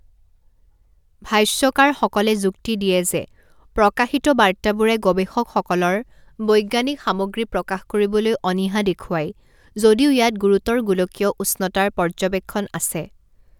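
No faults detected anywhere in this speech recording.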